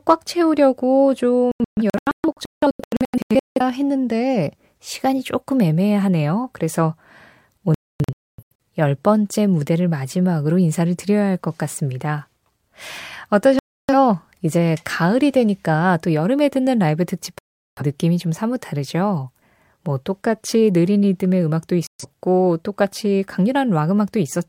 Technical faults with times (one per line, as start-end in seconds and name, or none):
1.51-3.61 digital broadcast dropout
7.74-8.63 digital broadcast dropout
13.59-13.93 digital broadcast dropout
17.39-17.82 digital broadcast dropout
21.87-22.05 digital broadcast dropout